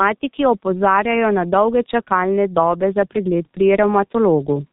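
Throughout the speech, the G.723.1 codec leaves heavy damage. Its rate of about 6 kbit/s keeps nothing above 4 kHz. The voice model updates only in 30 ms frames. So the speech sounds muffled and hoarse. Consonants blur together.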